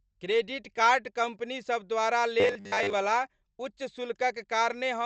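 Speech, and right after "क्रेडिट कार्ड कंपनीसभ द्वारा", from 2.40 to 2.93 s, there's robotic sound from repeated short buffers: a rigid 100 Hz buzz, likely from 10 ms chunks looping over skipped audio.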